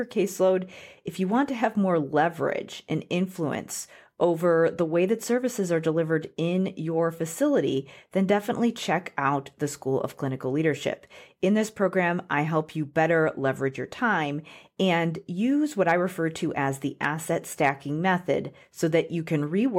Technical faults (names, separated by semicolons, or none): hard clipping